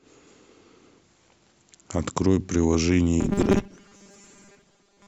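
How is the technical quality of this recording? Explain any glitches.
The recording breaks down near its end. Robotic sound from repeated short buffers runs from 3.21 s to 5.07 s: new audio likely arrived too seldom, so playback kept looping a fragment about 5 ms long while roughly half of the real signal was skipped. Those rapid repeats impose a fixed 200 Hz buzz, turning the speech into a rigid, metallic drone that only loosely tracks the speech underneath.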